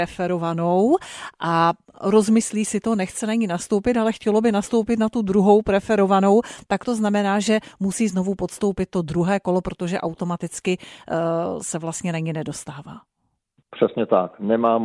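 No technical faults can be heard anywhere in this speech recording.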